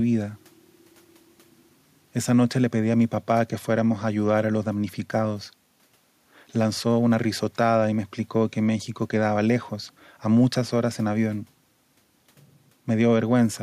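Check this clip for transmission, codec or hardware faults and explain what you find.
Nothing here points to a fault at all, and the only thing sitting under the speech is a bit of room noise about 44 dB down, which simply belongs to the room where it was recorded.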